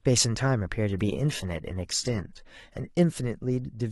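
An adaptive stream at a lower bitrate takes over from 0.89 s to 2.89 s, a two-second stretch of the speech. The player switched to a cheaper rendition when the connection slowed, then switched back. The change is abrupt in both directions, with no gap. During the stretch codec artefacts rise. This points to a drop from about 96 kbit/s AAC to a low-rate HE-AAC stream near 16 kbit/s.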